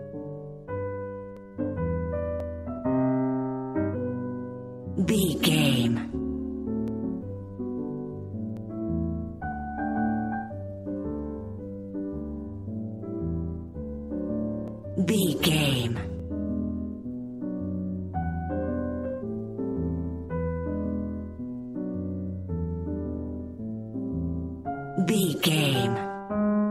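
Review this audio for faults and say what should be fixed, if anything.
Dropped samples at 1.37, 2.40, 6.88, 8.57, 14.68 and 16.20 s: single sharp clicks, each likely from under a millisecond of audio going missing so the waveform jumps ahead. Keep the capture buffer from underrunning by giving it more headroom and avoiding other load on the recording path.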